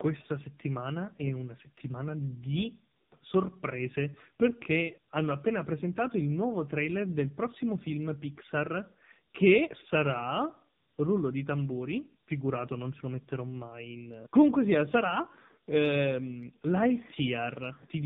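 From start to finish, the speech carries tandem speech coding. The call passed through two low-rate mobile speech codecs in a row, which fits AMR-NB at both ends, with a plain 64 kbit/s telephone link between them. Each border meant a full decode and re-encode. The second coder worked on sound the first had already damaged. Nothing reaches above 3.7 kHz. The result is rough, muffled and warbly, worse than one codec alone.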